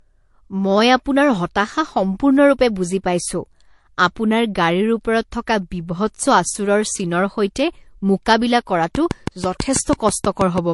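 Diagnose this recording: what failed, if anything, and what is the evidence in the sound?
At the codec stage, the speech shows transcoding between lossy codecs throughout: nothing above 11.3 kHz, with two different sets of smearing and swirl heard together. Unlike a single low-bitrate pass, the artefacts are mixed, which fits an HE-AAC encode likely re-encoded to MP3 near 53 kbit/s.

From 8.95 s to 10.59 s a train of clicks ticks at a regular 6.1 per second, around ten similar pulses peaking about 10 dB above the speech and continuing through pauses. That regular spacing and matching shape set it apart from random crackle, pointing to likely interference or a struggling interface in the analogue wiring or converter.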